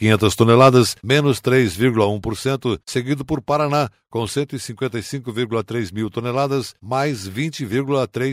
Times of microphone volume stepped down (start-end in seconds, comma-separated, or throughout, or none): 1.02, 2.04